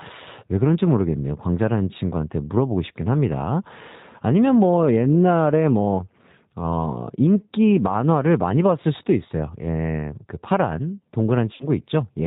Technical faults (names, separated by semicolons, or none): G.729 codec; VoIP packet loss concealed by the speech codec